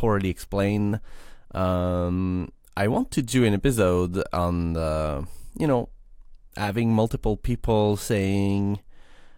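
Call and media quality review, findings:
No faults found in the signal path; the speech signal shows no audible dropouts, distortion, level problems or timing disturbances.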